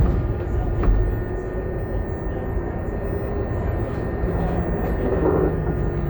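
No technical fault can be heard anywhere in this recording of sounds.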